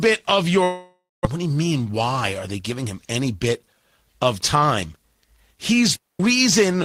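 From 0.63 to 1.27 s the speech gives way to a fading buzz, then about 190 ms of near silence, before resuming with roughly 400 ms of speech simply gone. This is likely a long network dropout, with the receiver stretching the last sound across the gap.

From 1.35 to 3.49 s the talking sounds hurried, running about 8% fast while the pitch stays put. This is a jitter buffer speed-up: after the stall left excess audio queued, short pitch-period slices were cut repeatedly, trimming about a fifth of a second.

From 5.96 to 6.20 s there is a clean hole of near silence lasting about 242 ms, with no noise burst on either side. That is a digital wireless dropout, where the receiver lost too much data from the link and muted quickly.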